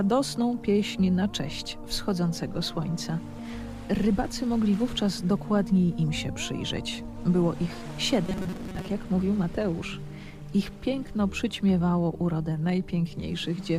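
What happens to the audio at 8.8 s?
Robotic sound from repeated short buffers runs 8.26 to 8.88 s. A rigid 188 Hz buzz sets in, likely from a roughly 5 ms buffer replayed instead of new audio.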